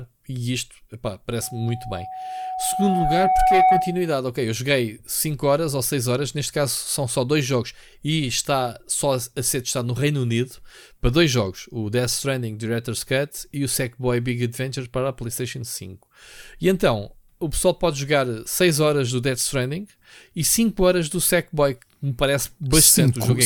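Speech, with a loudspeaker feedback squeal running from 1.42 s to 4.2 s. A single tone at 747 Hz rises out of the speech, swelling over roughly two seconds until it sits around 5 dB above the talker. The microphone is picking up the loudspeaker it drives, and at 747 Hz the gain around that loop exceeds unity, so each pass reinforces the tone until it stops at 4.2 s.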